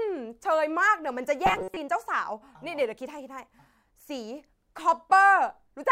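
Robotic sound from repeated short buffers, 1.46 to 1.77 s: the speech becomes a rigid metallic 188 Hz buzz, likely from a roughly 5 ms chunk replayed repeatedly.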